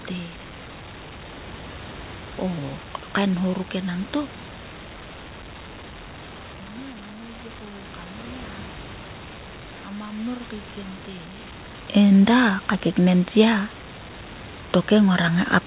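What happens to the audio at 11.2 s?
At 11.2 s the automatic gain control is still raising its gain, a gradual rise of about 4 dB from 9.84 s to 11.54 s. Because the boost applies to everything, the speech and room noise swell together until it settles just before "enda ka keknen".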